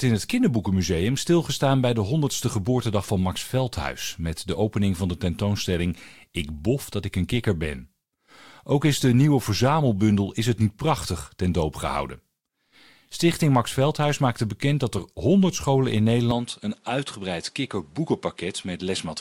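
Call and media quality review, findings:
Corrupt frame decoded, 14.97–14.99 s, right after "maakte bekend dat": brief chirp-like blip in the speech, one decoder frame's length. Damaged bits in a compressed frame were decoded anyway, so misread gains put energy at wrong frequencies. Burst peaks around -25 dBFS. Component: codec/transport path.

Input switched to a poorer device, 16.31 s to end, after "scholen in": abrupt dull, boxier tone with no gap at the switch. Top band now stops at 11.4 kHz, level drops about 5 dB, and a new noise floor sits roughly 40 dB under the speech. Likely cause: capture moved to a lower-grade microphone or headset profile.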